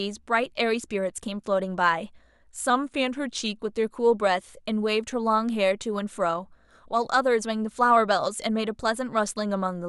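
Speech with a drift correction step from 2.70 to 3.57 s: it slows 5.6% and drops one semitone, likely from clock-matching resampling, so spectrogram harmonics step down, then snap back.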